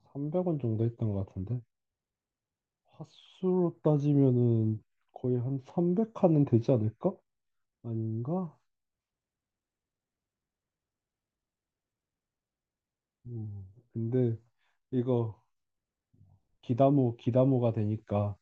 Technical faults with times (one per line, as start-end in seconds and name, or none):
none